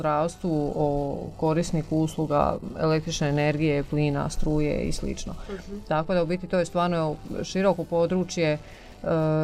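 No technical faults can be heard.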